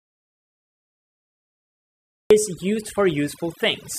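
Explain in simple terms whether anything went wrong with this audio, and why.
Dead silence from the very start until 2.31 s, with no room tone at all. That's an audio dropout to silence, likely the input getting cut or muted while recording carried on.

Once the speech arrives, overdone noise removal is audible throughout. The background is turned down and breaks up into little twinkly specks, and the voice's quieter parts were stripped out too.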